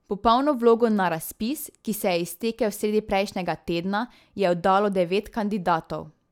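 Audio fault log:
No audible faults anywhere in this speech recording.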